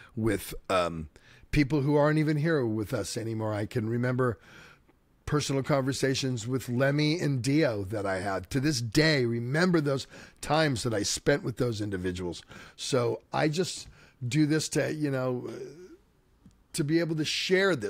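Speech recording, with no audible technical faults anywhere.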